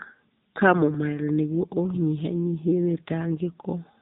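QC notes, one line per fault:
Throughout: AMR narrowband mobile codec. The speech has been squeezed through a low-rate mobile speech coder running at 8 kHz, with the heavy damage pointing to a mode around 6.7 kbps. Everything above 4 kHz is gone, so sibilants and crispness vanish. Each 20 ms frame is rebuilt from a vocal-tract model fed by only a few pulses, so the voice comes out buzzy, thin and noticeably synthetic.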